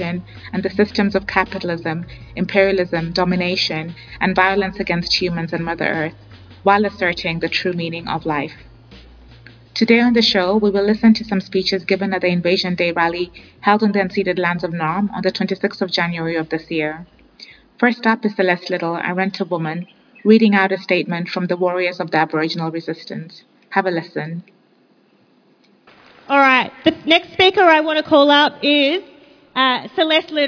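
No technical faults are audible.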